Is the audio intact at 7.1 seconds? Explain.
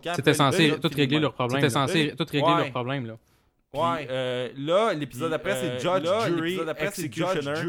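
No. A doubled audio track runs throughout the clip: a full-band copy trails about one and a half seconds behind, roughly 5 dB quieter, likely a second capture path. The waveform and spectrogram show each pattern repeated later with no decay or smearing.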